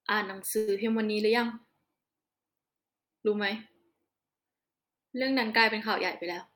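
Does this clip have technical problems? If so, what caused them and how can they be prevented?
Yes. At 0.57 to 0.70 s the speech stalls into a brief fading buzz lasting about 0.1 s, then resumes exactly where it left off, so nothing is lost but everything after arrives about 102 ms late. This call audio freeze was likely caused by packets being delayed in transit until the jitter buffer ran dry, forcing the receiver to stretch the last sound. A steadier network path, or a larger adaptive jitter buffer, would prevent it.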